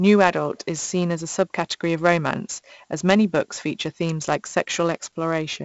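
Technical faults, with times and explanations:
Throughout, 4-bit ADPCM compression: coarse 4-bit steps from a prediction leave heavy gritty hiss tracking the speech level; nothing above 7.7 kHz, which fits a 64 kbps stream.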